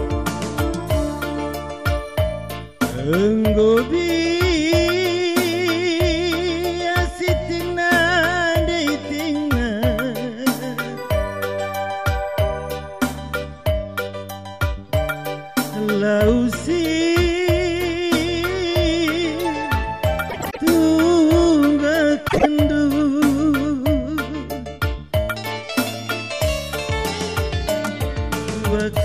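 Frames out of order at 20.29–20.58 s and 22.28–22.46 s: adjacent runs of about 104 ms and 52 ms swap places, giving a garbled flutter. Unlike a dropout, no time is lost.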